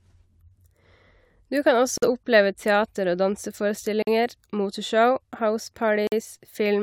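At 1.98 s, 4.02 s and 6.07 s the speech breaks into a hole of about 48 ms, a gap between chunks, repeating every 2.0 s. The audio was delivered in two-second pieces and silence was inserted at each join, so playback pauses and then continues exactly where it stopped. That separates it from a dropout: no sound is missing, only delayed, and the regular spacing and hard-edged silences mark it as a joining fault rather than lost data.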